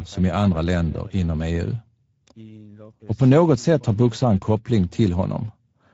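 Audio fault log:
Throughout: Speex codec. The speech has plainly audible coding damage. It sounds noisy and hoarse, with a rough, grainy edge. Speex is a CELP codec that models the vocal tract with a filter and spends its remaining bits on the excitation signal that drives it. The roughness suggests a middle quality setting, around 17 kbps. At that rate the excitation is coded coarsely, so noise gets into the voice.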